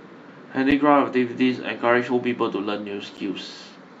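A speech clip with two blocks of digital silence, at 0.71 s and 3.17 s, each about 10 ms long. Unlike a dropout smoothed by a fade or concealment, the audio cuts out and back abruptly, giving a sharp tick, which points to an output buffer not filled in time.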